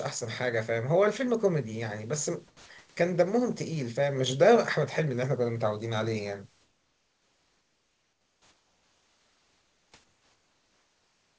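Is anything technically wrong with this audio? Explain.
Yes. Comfort noise in place of the background at 2.48–2.69 s, 6.62–9.92 s and 10.04 s to the end. Likely discontinuous transmission: synthetic noise replaces the room background during pauses, sounding flat and about 3 to 6 dB quieter.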